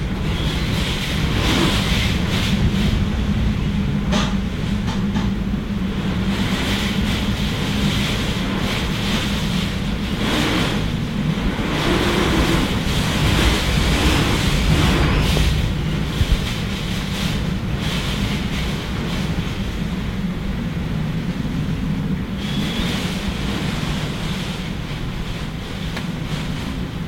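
At 15.37 to 15.39 s a single loud pop, well above the surrounding sound, likely from an electrical voltage pulse; the audio continues underneath without any gap, unlike a dropout click.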